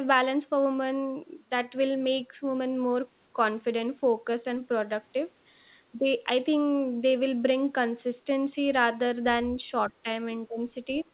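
Speech suppressed in double talk occurs twice, from 9.9 to 10.07 s and from 10.48 to 10.6 s. In each window the speech level sinks abruptly and then recovers, first by roughly 10 dB and then by something like 20 dB. This is likely an echo canceller that could not tell the near talker from loudspeaker echo while both sides were active, so it attenuated everything it picked up.

The other side's voice leaking through appears at 10.99 to 11.04 s as a faint fragment of a second voice, roughly 25 dB below the main speech. Because it is so short and quiet, it sounds more like a stray scrap than continuous talk. The audio is already band-limited to 4 kHz, which fits a narrowband G.711 call path. Over that path, the leak most likely comes from residual loudspeaker echo that the canceller failed to remove completely from the microphone signal.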